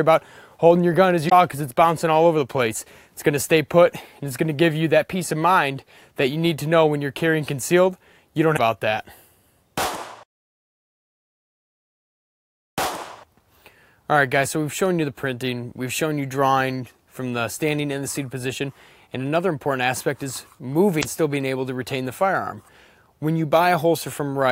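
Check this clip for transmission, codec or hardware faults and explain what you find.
One fault type recurs: damaged data in a compressed stream, at 1.27–1.32 s, 8.53–8.58 s and 20.99–21.05 s. Corrupted bytes make the decoder misread those frames and lose sync until it finds a valid header, producing a brief chirp or squawk of roughly 55 ms each time.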